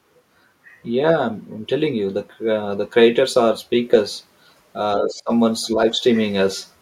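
At 4.98 s, a second voice comes through under the speech until 5.14 s. It sits only around 10 dB below the talker. This is the other side's voice leaking through. The far end likely played on a loudspeaker, and the echo canceller did not fully remove it from the microphone. At 5.64 s a much weaker scrap returns, lasting to 5.75 s. It sits far below the speech, around 35 dB down.

From 5.07 s to 5.31 s, the talker's voice drops away while the leaked voice overlaps it. The dip reaches roughly 20 dB. This is speech suppressed in double talk. With both sides active, the echo canceller likely could not tell its own talker from the echo, so it turned both down. From 5.75 s to 6.0 s a second, slighter dip follows, just a few decibels, and the voice briefly sounds pulled back.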